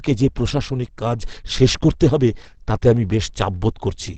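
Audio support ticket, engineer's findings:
Speech muffled and hoarse throughout, nothing above 8.6 kHz. Likely Opus compression in SILK speech mode, low bitrate near 16 kbps. Wideband limit cuts highs; plainly audible codec damage.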